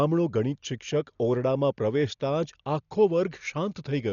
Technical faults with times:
0.00-4.12 Dolby Digital compression

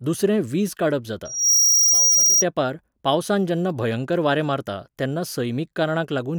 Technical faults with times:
1.25-2.44 loudspeaker feedback squeal

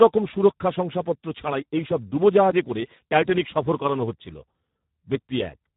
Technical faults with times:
0.00-5.77 Speex codec

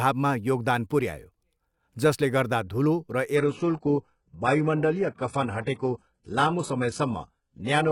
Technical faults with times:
3.36-7.91 adaptive stream at a lower bitrate

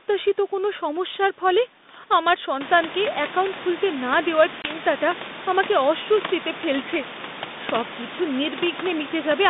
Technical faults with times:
4.62-4.69 packet loss on an ADPCM call

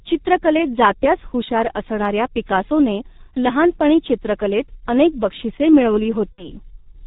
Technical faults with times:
0.00-7.06 G.723.1 codec
6.32-6.51 VoIP packet loss concealed by the speech codec

